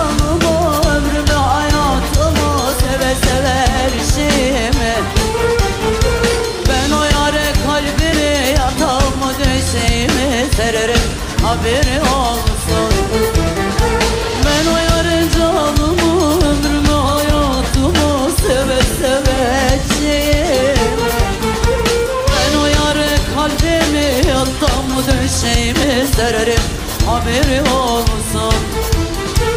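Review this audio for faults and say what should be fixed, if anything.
A brief smeared blip at 25.82 s, where about 50 ms of audio vanishes: compressed frames skipped, a couple of 26.1 ms frames dropped and their overlapping edges blended. Verify file integrity after encoding and transfer, and re-encode from the source wherever damaged frames appear.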